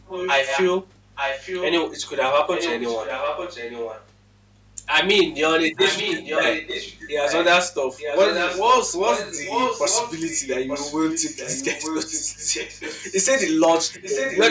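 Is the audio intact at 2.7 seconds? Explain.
No. From 2.53 to 4.07 s there is an echo leak: a delayed copy of the speech returns about 0.89 s late and roughly 10 dB quieter, likely because a loudspeaker's sound reached the microphone on that side and its echo canceller let some through. On a spectrogram the harmonic patterns reappear faintly, shifted later in time. Hard clipping is also present here and throughout: peaks are driven about 9 dB past the limit and cut flat, giving crackle on loud moments. A small fraction of samples are affected, visible as squared-off waveform tops and vertical smears of high-frequency energy on the spectrogram.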